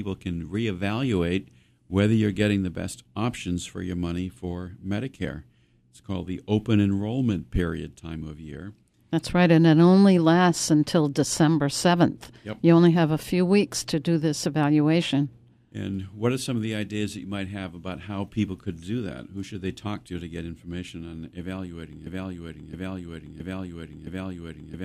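At 22.07 s, after "on evaluating", a broken-record loop begins. A 0.67 s fragment repeats exactly, back to back, four times until the clip ends. The likely cause is a stalled player or stream resending its last held piece. The speech that should follow is lost.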